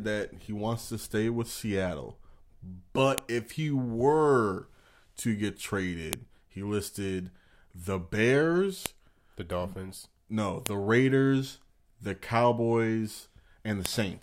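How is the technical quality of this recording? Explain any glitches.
The recording is marred by five sharp clicks at 3.18, 6.13, 8.86, 10.66 and 13.86 s: a file header played as audio. Joined WAV segments kept their header bytes, which play as a loud snap, seen as a thin tall spike and a vertical broadband line.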